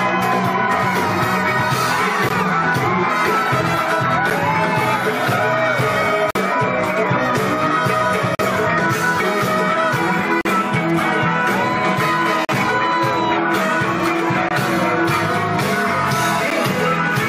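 Hard-edged dropouts to silence break the sound at 2.29, 4.30, 6.31, 8.35, 10.41, 12.45, 14.49 and 16.50 s, lasting from about 9 to 47 ms. These are gaps between stream segments: roughly every 2 s, segment timestamps leave a hole that the player fills with silence. No audio is lost.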